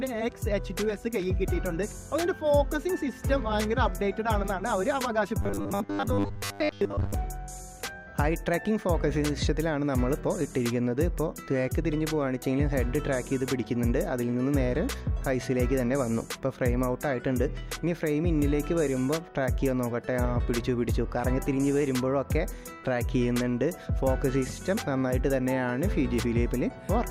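From 5.42 to 7.14 s the sound collapses into a rigid, metallic buzz pitched at 100 Hz: robotic sound from repeated short buffers. The likely cause is audio arriving too slowly, so the last 10 ms chunk is replayed over and over while most of the real material, roughly two-thirds or more, is skipped. Unlike plain dropouts or clicks, nothing goes silent; the rough contour survives, locked to one steady buzz pitch.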